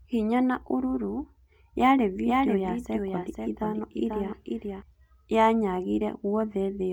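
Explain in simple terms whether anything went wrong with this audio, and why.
Something did go wrong. From 2.24 to 4.82 seconds there is a doubled audio track. The same speech plays twice at once. A second copy runs about half a second behind the first, a little quieter. It sounds like a stiff echo, but it does not fade like a real one. It switches on and off suddenly at those times. The likely cause is the sound being picked up again by a slower route, or an edit leaving two copies out of line.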